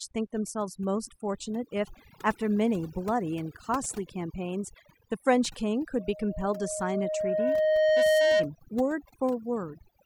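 A speech recording with overdone noise removal running through its whole length: the noise reduction was set so aggressively that frequency bands sitting near the noise estimate are pulled far down or switched off, taking quiet parts of the voice with them. The background sinks to near silence dotted with twinkling specks. On a spectrogram this shows as a dark, blotchy floor scattered with isolated bright dots, and speech harmonics with ragged, eaten-away edges. From 5.98 s to 8.51 s a loudspeaker feedback squeal appears, a single tone at 621 Hz that swells over roughly two seconds until it stands about 10 dB above the speech. It arises because the microphone is picking up the loudspeaker it drives, and at that one frequency the loop gain exceeds one, so the tone feeds itself and keeps growing. A spectrogram shows a bright horizontal line at 621 Hz, fading in and then holding strong, while the waveform's envelope swells steadily through that stretch.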